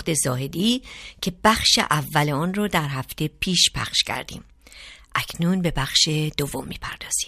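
No technical faults can be heard anywhere in this speech recording. Nothing in the signal chain calls attention to itself at any point.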